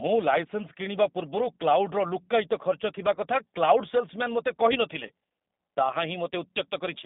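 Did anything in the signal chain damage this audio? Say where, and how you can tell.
Yes. At the codec stage, the whole clip carries G.729 coding at 8 kbit/s. The speech sits in a narrow band of roughly 200 Hz to 3.7 kHz, with nothing above, and has a plainly audible rough, synthetic grain. That grain comes from rebuilding each frame from a filter, a pitch predictor and a few pulses. Simple band-limiting would keep the waveform smooth, so the grain points to this low-rate codec rather than a narrow telephone line.

At the network stage, there are two brief concealment events, from 3.15 to 3.20 s and from 5.07 to 5.11 s. Each is VoIP packet loss concealed by the speech codec. The decoder stretches its last pitch and filter into a buzzy tone or a coloured noise that fades, and the voice stays weak or distorted as the following frames rebuild. This differs from a hard dropout or click, which would leave silence or a sharp edge. 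Each gap fits a single lost 20 ms packet.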